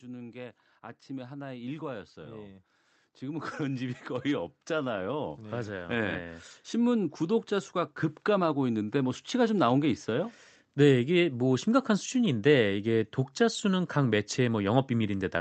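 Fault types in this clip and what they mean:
Automatic gain rising, 0.05 to 2.65 s and 3.19 to 10.36 s: the level control judged the incoming signal too quiet and pushed its gain up slowly rather than in a step, so voice and background noise swell together. The first rise adds about 5 dB over roughly two and a half seconds. The second is larger and slower, about 12 dB over some seven seconds, through the call path's band-limited sound, which tops out near 8 kHz.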